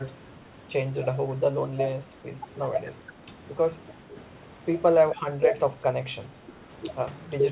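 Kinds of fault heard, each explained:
Speech suppressed in double talk: the speech dips briefly four times, deepest around 5.2 to 5.5 s, likely an echo canceller turning down overlapping talk.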